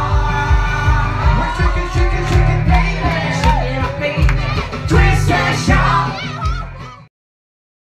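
No technical faults are audible anywhere in the clip.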